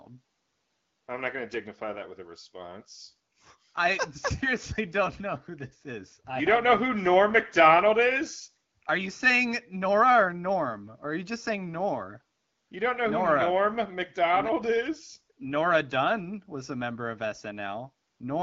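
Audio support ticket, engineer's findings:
Speech band-limited to about 7 kHz, consistent with AMR-WB (HD Voice) at a rate around 12.65 kbit/s; only light coding texture audible, no dropouts, clipping or level faults found.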